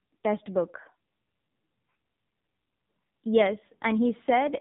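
AMR narrowband mobile codec damage runs through the whole speech clip and is heavy. The sound has been squeezed into a narrowband mobile channel: nothing passes above 3.8 kHz, and each 5 ms of it is rebuilt from a vocal-tract filter fed by a pitch predictor and only a few pulses. The result is buzzy and synthetic, with a muffled, telephone-like top. That degree of roughness points to one of the codec's lower modes, around 6.7 kbps.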